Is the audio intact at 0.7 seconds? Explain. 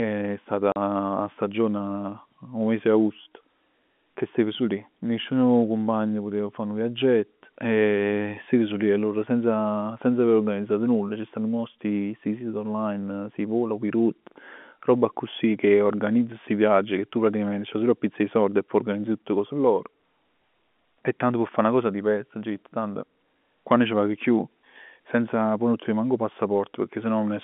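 No. From 0.72 to 0.76 s, just before "'a stagione", packet loss filled with silence cuts a 40 ms hole, which fits two lost 20 ms packets. The hole has hard edges. The waveform drops abruptly to a flat line, and the spectrogram shows a blank vertical gap.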